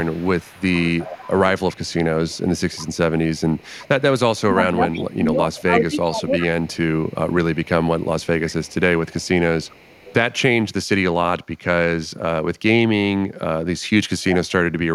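Echo leak runs from 0.0 to 5.61 s and again from 6.43 to 10.14 s in this speech recording. A faint copy of the voice trails the original by 361 ms. It sits around 20 dB below the speech at first and somewhat lower in the second stretch. The likely cause is a loudspeaker on the far end whose echo canceller let part of the microphone pickup through, returning the talker's own voice late and weakened. Speech suppressed in double talk appears between 4.41 and 6.41 s, where the voice dips in pieces by as much as roughly 20 dB for about a second and a half in total. This is likely because both sides spoke at once and the echo canceller, unable to tell the local talker from the loudspeaker echo, turned both down.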